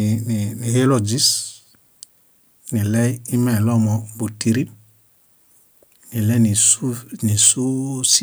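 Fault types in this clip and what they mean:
microphone overload: The input volume on the microphone was likely set too high, so the loudest peaks ran past the converter's ceiling and had their tops sliced flat. In this speech clip that shows up as three short bursts of harsh, crackling distortion: 6.59 to 6.72 s, 7.4 to 7.51 s and 8.05 to 8.16 s. The peaks overshoot the limit by about 4, 5 and 3 dB, with only a small fraction of samples flattened each time.
microphone volume stepped down: The call software likely judged the microphone too hot and cut the device's input volume in a single step rather than easing it down. Here that step lands at 7.48 s, inside the worst distorted peak. From that point the speech and the background behind it sit about 2 dB lower, an abrupt drop in level with no fade.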